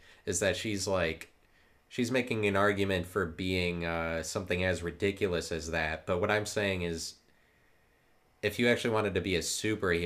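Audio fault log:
No fault is heard in this speech clip.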